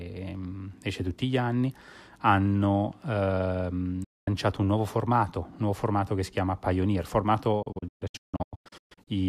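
A digital broadcast dropout hits this speech twice: the receiver stopped getting valid frames and muted until good data returned. At 4.04 s it fades out over about 8 ms into a clean 0.24 s hole before the sound resumes. From 7.62 s to 9.08 s, losses scatter across roughly 1.4 s as repeated short silences, the longest 0.16 s, totalling about 0.9 s missing. Whatever was transmitted during those gaps is gone, not smeared.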